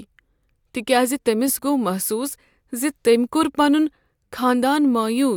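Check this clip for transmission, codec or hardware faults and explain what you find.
Nothing in the speech signal points to a problem in transmission, encoding or the playback hardware, with level, continuity and timing all holding steady throughout.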